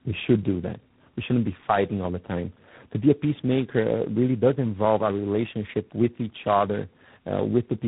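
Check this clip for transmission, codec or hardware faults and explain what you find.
There's one fault, and it runs the whole way through: tandem speech coding. The speech was decoded and re-encoded across roughly three low-rate codec stages, plausibly G.726 and G.729A with G.711 links between, each one degrading what the last left. It sounds rough, muffled and warbly, with nothing above 3.9 kHz.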